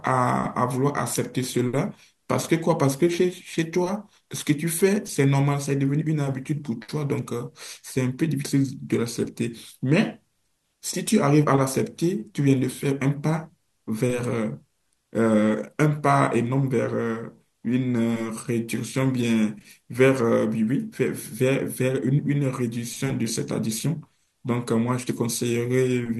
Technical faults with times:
none

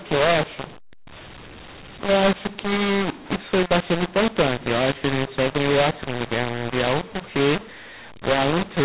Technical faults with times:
0.00-8.84 mu-law and A-law mixed up

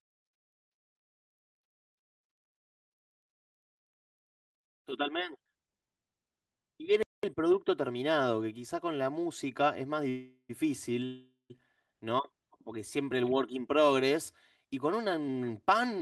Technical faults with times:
7.03-7.23 playback stall
10.09-10.51 call audio freeze
11.05-11.52 call audio freeze
14.66-16.00 jitter buffer speed-up

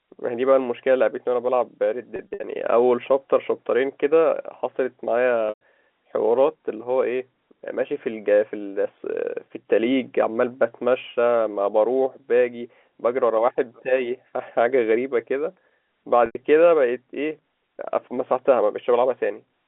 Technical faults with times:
2.16-2.40 packet loss with pitch repetition
5.49-5.60 packet loss with pitch repetition
16.26-16.35 packet loss with pitch repetition

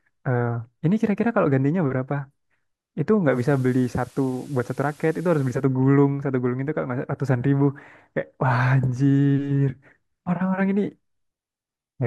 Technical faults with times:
3.28-5.65 digital radio blending to analogue

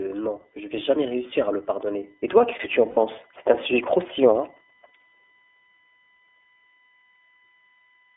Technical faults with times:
0.00-8.16 USB whine
0.00-8.16 iLBC codec
2.91-2.98 lost iLBC frames

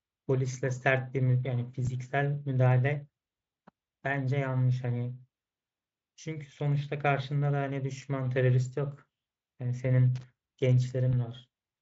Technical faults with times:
1.85-1.89 VoIP packet loss concealed by the speech codec
10.16-10.24 loose connector crackle
11.11-11.14 VoIP packet loss concealed by the speech codec

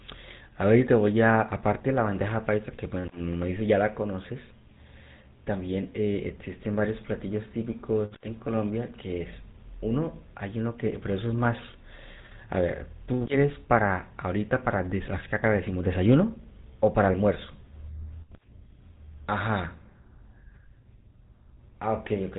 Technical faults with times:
0.00-22.38 GSM full-rate codec

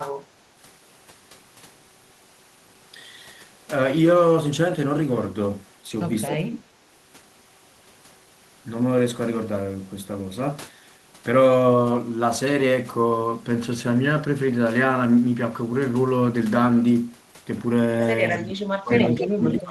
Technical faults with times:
6.29-6.81 speech suppressed in double talk
18.33-18.42 echo leak
18.36-19.70 speech suppressed in double talk

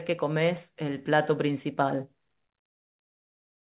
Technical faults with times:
none

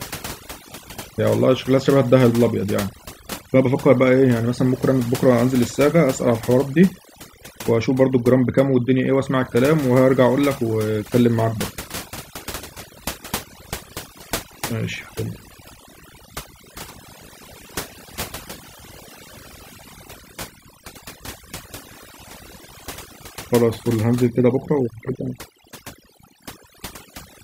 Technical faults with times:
0.00-27.44 overdone noise removal

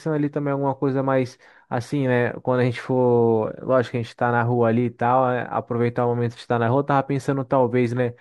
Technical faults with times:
none

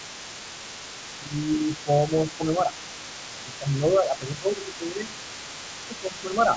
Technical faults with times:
0.00-6.56 other side's voice leaking through
1.19-1.88 speech suppressed in double talk
2.31-2.75 speech suppressed in double talk
3.32-5.08 speech suppressed in double talk
5.87-6.37 speech suppressed in double talk

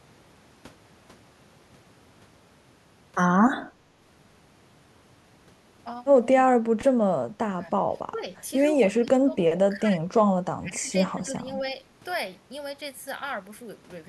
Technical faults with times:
7.02-7.08 speech suppressed in double talk
7.50-8.27 speech suppressed in double talk
8.92-11.77 speech suppressed in double talk

